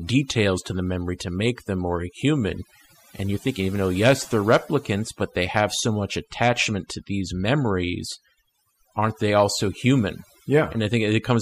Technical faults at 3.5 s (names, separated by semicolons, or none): overdone noise removal